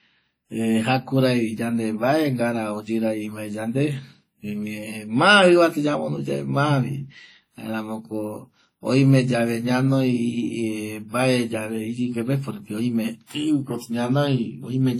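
WMA compression runs through the whole speech clip. The sound rings and turns washy, with a hiss that swells and fades as the level rises and falls. That points to heavy quantisation in a simple transform encoder, likely WMA version 1 at a low bitrate around 32 kbps. Its long blocks smear noise across tens of milliseconds and strip out weaker spectral detail, though content still reaches up to about 19.8 kHz.

Pre-echo appears from 13.27 to 13.30 s, just before a sharp attack. A short hiss leads it by about 35 ms, and the onset sounds softened and smeared. The attack sits late in a transform block. The encoder spreads its quantisation noise evenly over that block, so noise scaled to the loud attack spills into the quiet stretch ahead of it, where nothing masks it.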